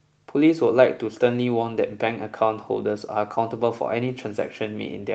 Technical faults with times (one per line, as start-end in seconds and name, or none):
none